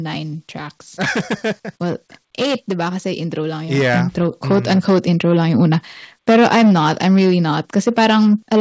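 From the first moment to the end, the speech is hard clipped. The signal arrives roughly 15 dB hotter than the stage can pass, so around a tenth of the samples are sliced flat at the ceiling. Those squared-off tops spray harmonics high into the band, and every loud syllable carries a harsh, buzzing fuzz. That edge appears only on the peaks and grows with level. Codec coding noise, by contrast, sits evenly under quiet and loud passages alike, and the band here stops at 8 kHz, consistent with a G.722 call path at 64 kbps.

From 1.78 s to 5.66 s, automatic gain rising lifts the level by about 7 dB. The gain control judged the input too quiet and turned itself up, so the loudness climbs smoothly over nearly four seconds rather than jumping. The background rises in step with the speech, which marks it as a gain change rather than a talker moving closer to the microphone.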